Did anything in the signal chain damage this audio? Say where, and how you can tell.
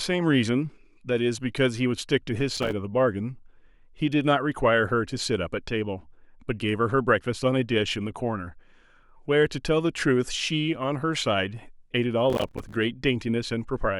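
Yes, there's processor overload crackle at the driver and buffer stage, from 2.57 to 2.72 s and again, longer, from 12.3 to 12.74 s. The CPU kept missing deadlines on roughly 5 ms buffers, each miss leaving a hard-edged silent gap, so the speech tears gritty.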